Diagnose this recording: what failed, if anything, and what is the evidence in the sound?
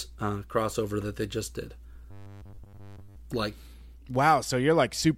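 Right after "that they just did", from 2.11 to 3.17 s, the speech collapses into robotic sound from repeated short buffers: a rigid, metallic buzz at 100 Hz that only loosely tracks the words. The fault sits at the driver or buffer stage, likely an underrun where the same 10 ms block was replayed while most of the incoming audio was dropped. On a spectrogram this shows as a rigid comb of harmonics at multiples of 100 Hz, and the waveform repeats identical 10 ms cycles.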